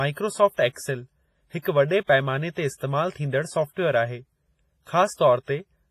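Right from the start the speech has that ringing, washy quality, with a hiss that swells and fades with the level and nothing above 15.4 kHz. That's heavy damage, likely from WMA compression at a low bitrate, something like 24 kbps, with weak detail zeroed out. At 1.62 to 1.65 s, and again at 2.05 to 2.09 s, there's pre-echo: a short hiss arrives about 29 ms and then 48 ms before sharp attacks, so they come across soft and smeared. The codec spread its noise over each block, filling the quiet just before the onset.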